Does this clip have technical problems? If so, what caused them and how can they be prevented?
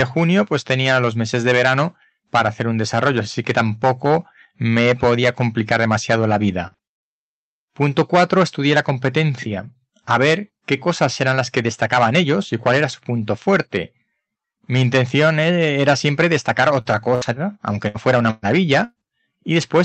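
Yes. Hard clipping runs through the whole clip: the signal was driven about 10 dB past what one stage could pass, so a few percent of peaks are cut flat, giving harsh crackle on loud sounds. Set gain so peaks stay below full scale.

A short stall from a late packet at 6.67–6.75 s: the jitter buffer ran empty, so the receiver held the last sound for 43 ms, adding a brief drawn-out buzz. A deeper jitter buffer or a steadier network path avoids this.

A lost packet rebuilt from error correction at 6.72–6.78 s and again at 19.62–19.68 s: each 60 ms was replaced by a low-bitrate Opus copy, so those moments sound rougher and noisier. Lower packet loss on the link prevents it.

A jitter buffer speed-up at 11.88–12.25 s: excess buffered audio was trimmed by dropping pitch periods, about 40 ms in total, so this stretch plays at 110% speed and sounds hurried. Smoother packet delivery keeps the buffer from overfilling.

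Repeated packet loss (robotic sound) at 16.81–18.99 s: five separate losses, the longest 119 ms and 360 ms in total, were each patched by extending prior sound, giving choppy audio with pieces missing. A more reliable connection or stronger loss protection prevents it.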